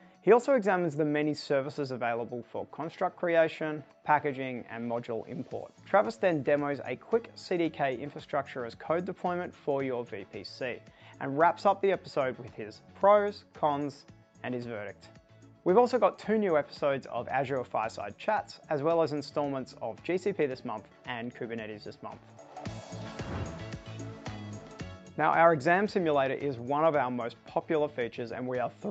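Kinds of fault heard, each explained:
No faults detected; the audio runs through normal call microphone processing and an Opus call path at 64 kbps, with nothing above 8 kHz.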